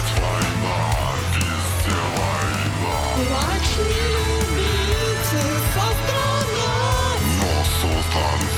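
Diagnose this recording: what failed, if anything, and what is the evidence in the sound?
Nothing failed, and the sound gives no evidence of a fault at any stage.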